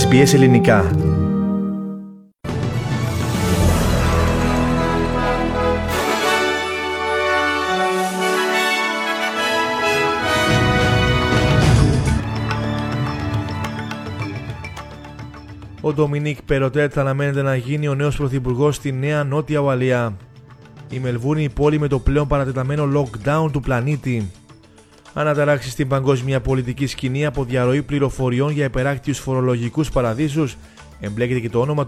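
No technical faults are audible.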